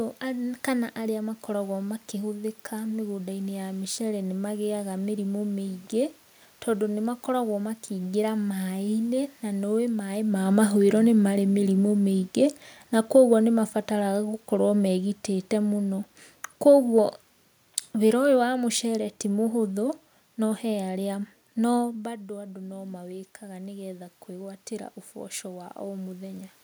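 After the talker moves away, automatic gain rising runs from 21.98 to 26.57 s. Voice and room noise swell together by about 7 dB.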